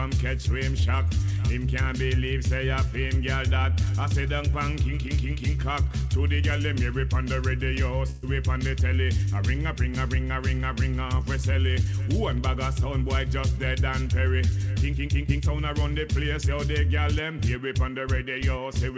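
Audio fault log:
8.10–8.25 s, burst of packet loss: About 120 ms of audio never arrived in time. The receiver stretched the last sound over roughly 126 ms and faded it down, so a held, dimming tone or hiss replaces the gap. Playback then resumes further on, with that stretch missing.
15.27–15.30 s, short concealed packet loss: About 20 ms failed to reach the decoder. The receiver bridged the hole with roughly 14 ms of continued sound before blending back into the real audio. It is heard as a brief smear or wobble, in audio already limited to 8 kHz by the call codec.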